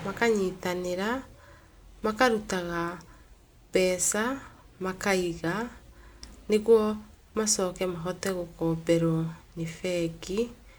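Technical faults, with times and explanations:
No technical faults can be heard in this speech recording.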